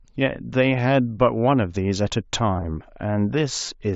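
At 2.55–2.64 s and 3.66–3.68 s, concealed Bluetooth headset packet loss fills brief gaps with repeated waveform copies: a buzzy flutter, seen as periodic, smeared harmonic striping.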